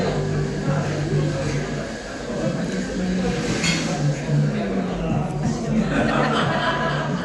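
Throughout, nothing sounds above 11.4 kHz and tones carry a rough, fluttering noise rather than swirling, which points to likely Dolby Digital compression at a low bitrate around 64 kbps.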